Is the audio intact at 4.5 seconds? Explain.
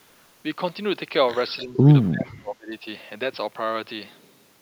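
Yes, the audio is intact at 4.5 seconds, with no fault at that moment and only the room's own background noise sitting about 53 dB below the speech.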